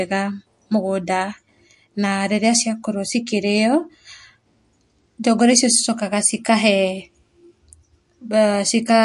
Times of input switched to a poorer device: none

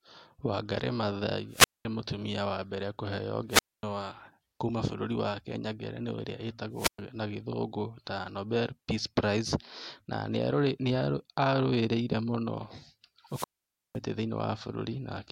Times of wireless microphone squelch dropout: 1.50-1.85, 3.49-3.83, 6.74-6.99, 13.28-13.99

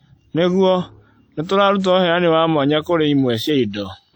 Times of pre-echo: 1.79-1.84

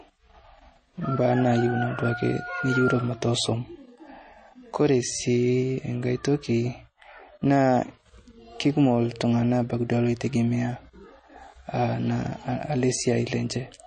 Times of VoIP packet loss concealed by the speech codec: none

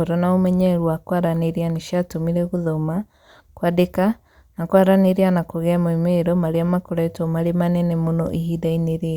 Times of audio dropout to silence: none

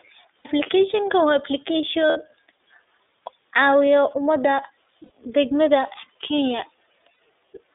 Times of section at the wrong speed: none

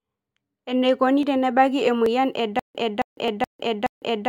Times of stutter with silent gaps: 2.59-4.28

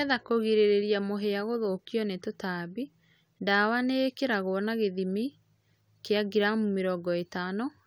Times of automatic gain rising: none

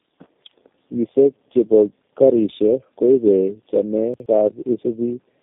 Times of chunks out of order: 4.14-4.26

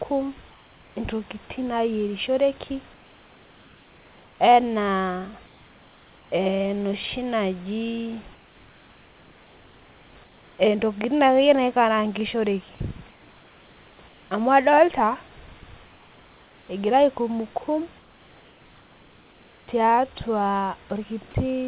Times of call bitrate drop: none

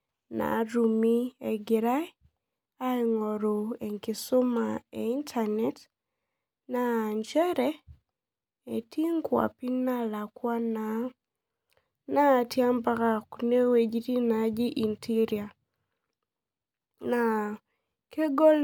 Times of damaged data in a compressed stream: none

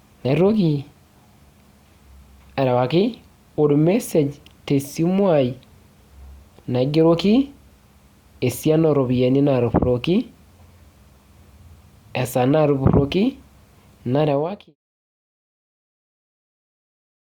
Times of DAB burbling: none

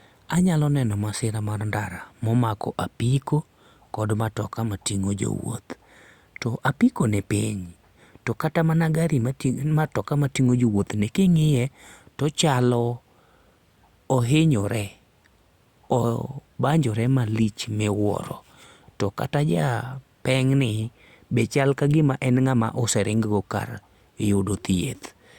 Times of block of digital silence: none

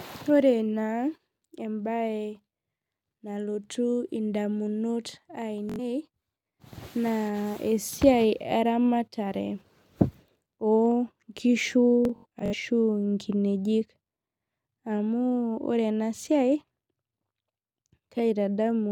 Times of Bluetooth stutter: 5.69-5.79, 12.05-12.54

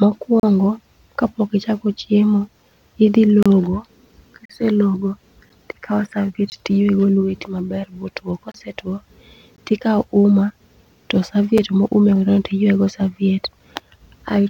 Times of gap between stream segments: 0.40-0.43, 3.43-3.46, 4.45-4.50, 5.49, 6.50, 8.52-8.54, 9.56, 11.58

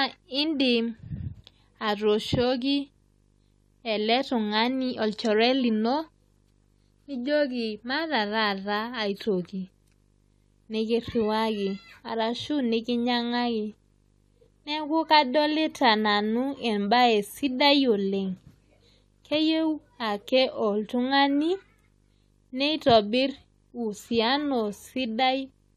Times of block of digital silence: none

